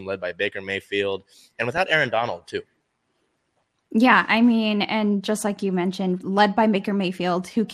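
MP2 compression runs throughout: the speech sounds dull and gurgling, likely from Layer II coding at a rate that fits about 80 kbps, where upper sub-bands are starved of bits and drop out.

DAB burbling hits from 1.77 to 1.82 s: a brief burst of burbling, where bit errors, consistent with roughly 0.2 percent, slipped into the audio data across what sounds like three frames.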